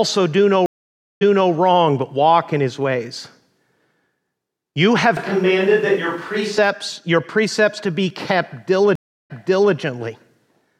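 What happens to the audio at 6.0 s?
A switch to a distant microphone runs from 5.17 s to 6.58 s, so 6.0 s falls inside it. The close pickup drops out and the speech is likely being captured by a microphone further away, which hears much more of the room. The voice abruptly turns roomy and hollow, with thinner bass, while its overall level stays roughly the same. Background noise rises to around 30 dB below the speech, and the sound snaps back just as suddenly at 6.58 s.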